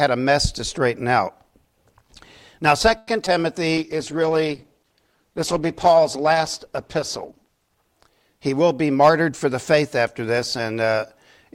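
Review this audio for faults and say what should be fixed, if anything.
At 2.97 s the sound stops moving forward and a fading buzz carries on for about 0.1 s until 3.09 s. This is a call audio freeze. The likely cause is delayed packets that let the jitter buffer run dry. The receiver stretched the last sound to cover the wait. Nothing is lost when the packets arrive, but the audio now runs about 100 ms later. A larger jitter buffer with more headroom would prevent it.

At 3.25 s there is a brief smear lasting about 30 ms. This is short concealed packet loss. About 20 ms of audio never reached the decoder in time. The receiver patched the hole by extending what came before, then blended back into the real signal. Part of it could not be covered and is simply missing. Forward error correction or redundant packets would prevent this.

From 3.77 s to 7.83 s the sound turns rough and muffled. 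This is a call bitrate drop. The encoder went from 128 kbps down to 13 kbps and stayed at the bottom for almost 4 s. At that rate the coding is coarse and the high frequencies are cut away. Better bandwidth estimation, or a higher minimum bitrate, would prevent it.

From 8.52 s to 9.83 s the audio runs about 8% fast at the same pitch. This is a jitter buffer speed-up. The buffer held more than its target, so the receiver cut out short pitch-period pieces again and again. Roughly a tenth of a second was removed in total. Smaller delay targets, or gentler catch-up spread over a longer span, would prevent it.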